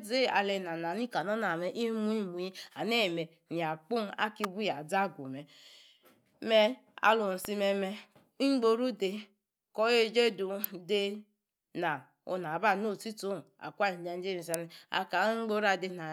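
Electrical switching spikes at 4.44 s (after "ya kpung"), 7.45, 10.64 and 14.54 s (after "own akwa ninjaje") cut through this speech as sharp snaps sitting on top of the audio, the last loudest, likely short arcs from a nearby switch or motor coupling into the line.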